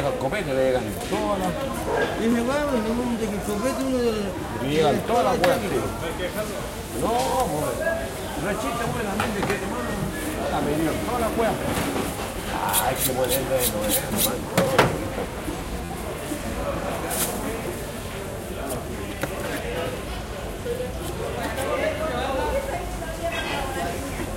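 A repeated buffer at 2.32 s, and again from 15.85 to 15.89 s: new audio arrived late, so the device replayed the last 11.6 ms block, which fits a 512-sample buffer. The first event plays that block once more, giving a single click. The second repeats it four extra times, giving a brief buzz with a hard join at each repeat. Because the audio is held back rather than dropped, essentially nothing is missing afterwards.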